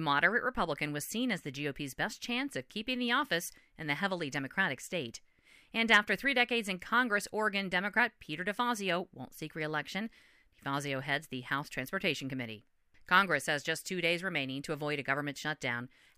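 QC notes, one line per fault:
No faults found.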